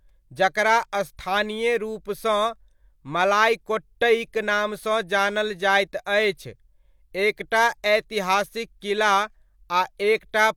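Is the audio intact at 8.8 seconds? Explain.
Yes, at 8.8 seconds the speech carries through cleanly, with no audible dropout, click, distortion or other fault at that moment.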